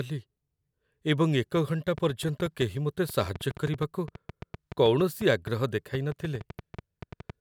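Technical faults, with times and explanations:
1.56 to 7.31 s, train of clicks: an uneven ticking of near-identical pops, about 6.6 per second and around forty in all, runs over the speech and through its pauses, peaking some 5 dB above it. This is likely interference or a faulty connection or power supply injecting repeated pulses.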